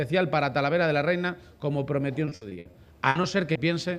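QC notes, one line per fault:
2.25–3.57 s, repeated packet loss (robotic sound): ten dropouts of up to 60 ms, about a quarter of the span, each patched by extending the preceding sound, giving choppy texture with pieces missing. The spectrogram shows smeared, repeated frame patches, and the waveform shows looped segments.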